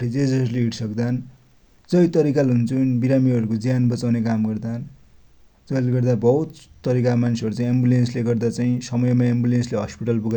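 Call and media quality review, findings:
Nothing stood out on listening to this speech recording.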